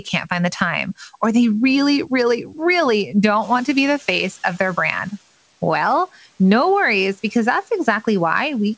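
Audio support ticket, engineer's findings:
Speech cut by the noise suppressor, 2.45–2.59 s. Suppressor misread part of the speech as noise and attenuated it along with the background; gain drops by about 9 dB at its deepest over roughly 150 ms. That stretch sounds swallowed and faint.

Noise suppressor catching up, 3.41–5.14 s. Room noise jumps by about 13 dB near 3.5 s; the suppressor's noise estimate lags behind. Adaptation takes 1.73 s, so the noise first passes with little reduction, then sinks by about 7 dB as the estimate catches up.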